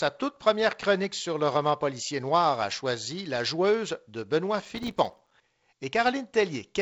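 Speech, carried over G.722 wideband telephone coding at 48 kbit/s with nothing above 7.7 kHz, breaks into a gritty burst of crackle from 4.62 to 5.31 s that tears across the sound. This is processor overload crackle. The processor fell behind and missed dozens of buffer deadlines again and again over that stretch, each buffer lasting a few milliseconds. Every miss left a brief hard-edged silence, and strung together these dropouts become the crackle heard here.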